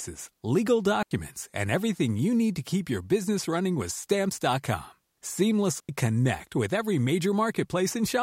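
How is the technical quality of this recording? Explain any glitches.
The recording has two short gaps. Digital wireless dropouts at 1.03–1.11 s (before "and everything you need") and 5.80–5.89 s (before "connect with every") occur when the receiver, losing too much data, mutes briefly, leaving clean near-silent holes of about 86 and 90 ms without noise bursts.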